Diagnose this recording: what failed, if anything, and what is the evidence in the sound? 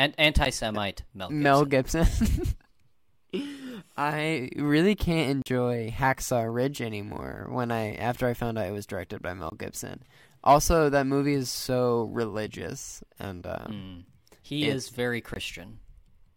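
Blocks of digital silence cut the speech at 0.45 s, 5.42 to 5.46 s, 9.50 to 9.52 s and 15.34 to 15.36 s. Each edge is abrupt. The 40 ms gap is a hole. This points to the buffer stage, with zeros where samples should be.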